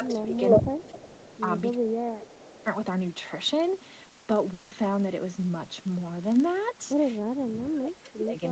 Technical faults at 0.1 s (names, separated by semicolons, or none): filter restarted on every block; speech suppressed in double talk; echo leak